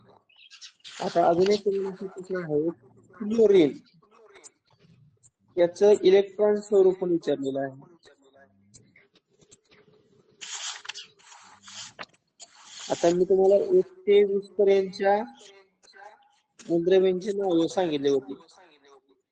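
At 5.90 s the quality drops abruptly, with no gap, and stays down until 11.90 s. This is an adaptive stream at a lower bitrate. The connection slowed, so the player switched to a leaner version of the stream, then switched back. Across those six seconds compression artefacts rise. The sound fits a step from about 128 kbit/s MP3 down to roughly 33 kbit/s.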